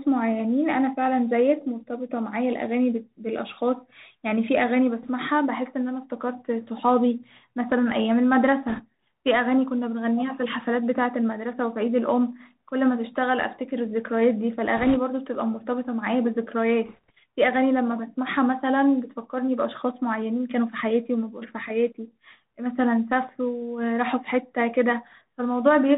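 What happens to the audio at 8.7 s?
From 8.68 to 8.83 s, bit errors on the Bluetooth voice link flip a couple of percent of the CVSD bits. Each bit carries the same small step, so errors fade quickly. The result is a brief rushing crackle rather than loud clicks. A spectrogram shows a short smear of broadband noise up to the 4 kHz ceiling, and the waveform shows fuzzy jitter with no spikes. Underneath, the Bluetooth CVSD headset codec keeps everything below 4 kHz, with scratchy sibilants and granular hiss.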